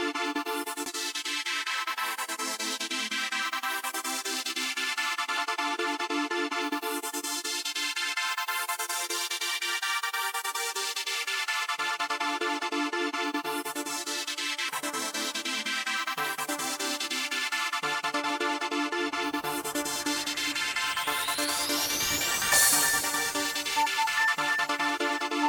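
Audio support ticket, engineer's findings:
Damaged data in compressed stream: corrupted bytes in several frames; decoder misreads them, loses frame sync, rescans for next valid header. Symptom: five brief artefacts (chirp, squawk, click or short hole), under 20 ms each, at 0.86, 5.37, 14.68 and 18.23 s, plus one of about 20 ms at 20.51 to 20.53 s. Probable component: transport or storage upstream of decoder, not playback chain.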